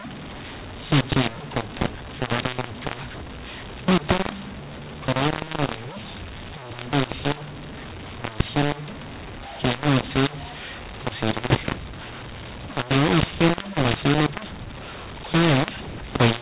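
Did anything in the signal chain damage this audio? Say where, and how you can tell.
Yes: at the codec, mu-law audio is decoded as A-law throughout, a mu-law and A-law mix-up. Levels scramble, speech turns harsh, and pauses fill with noise.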